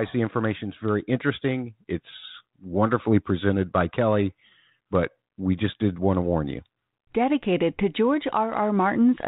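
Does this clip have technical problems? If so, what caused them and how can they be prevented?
No, the speech comes through a 32 kbit/s G.726 ADPCM telephone path working as intended, with content above 4 kHz absent and only light coding texture, and no technical fault occurs anywhere in the recording.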